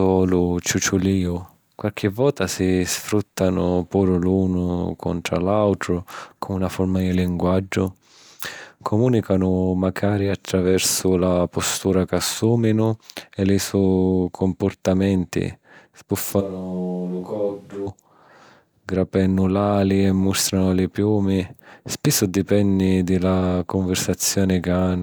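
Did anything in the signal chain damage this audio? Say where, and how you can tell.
Yes. From 16.42 to 17.86 s the capture stage likely lost the close microphone and fell back to a distant one. The speech abruptly turns roomy and hollow with thinner bass, drops about 5 dB, and room noise rises to roughly 35 dB below the speech.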